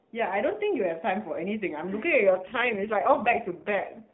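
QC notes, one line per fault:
2.31 to 4.14 s: AMR rate drop. From 2.31 s to the end the speech turns rougher and buzzier, with no gap and no change to the 4 kHz narrowband limit. This fits the codec stepping down from 12.2 to 4.75 kbps, so fewer excitation pulses model each subframe.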